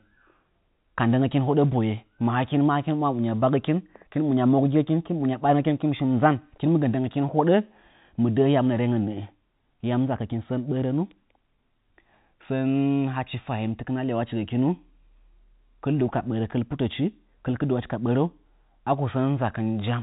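There are no technical faults to describe in this speech, which comes through the narrow band of G.711 telephone coding with nothing above 3.8 kHz.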